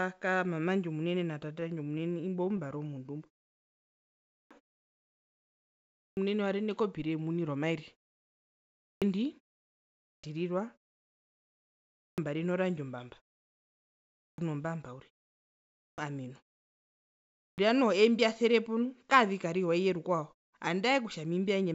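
From 1.54 to 3.28 s there's a run of repeated stalls (stutter): fourteen tiny hiccups where packets showed up late and the jitter buffer ran dry, so the receiver stretched the last bit of sound to cover. None lasts more than 16 ms, about 138 ms in total, and nothing's actually lost, but the speech drags and catches.

Right after, from 3.30 to 5.31 s, comes a jitter buffer slow-down. The buffer was low, so it padded itself by repeating single pitch periods and slivers of pause, adding 167 ms. Speech plays at 92% speed with the pitch unchanged, so sounds come out drawn out.

Starting at 4.08 s we get the first clipped start after a pause, and it keeps happening at 4.08, 5.71, 8.57, 9.81, 11.79, 13.91, 15.52 and 17.17 s. Each time the output device has dozed off in a gap of 0.49 to 1.19 s and is slow to wake, so roughly 0.39 to 0.47 s of the next phrase vanishes. Speech pops in abruptly with its opening sounds missing.

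From 7.26 to 9.19 s there's a jitter buffer speed-up, overlapping the clipped start at 8.57 s. Too much audio had piled up, probably from delayed packets landing together, so the receiver trimmed out short pitch-period chunks, around 0.15 s altogether. Speech runs at 107% with the pitch intact and sounds a touch rushed.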